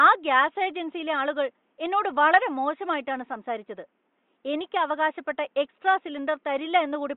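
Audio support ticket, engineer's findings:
No faults found in the speech clip. Room noise sits roughly 48 dB below the speech, which is normal background in the microphone's room.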